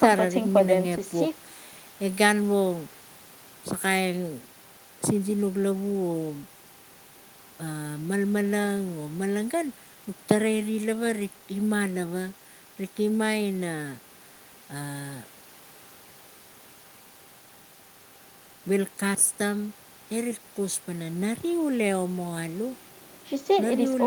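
No technical faults are audible.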